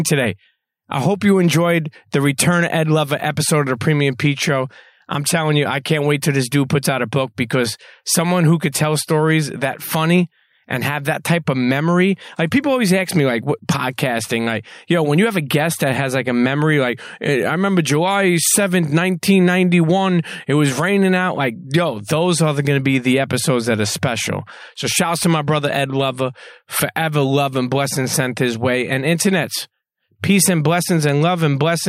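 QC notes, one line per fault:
No audible faults found.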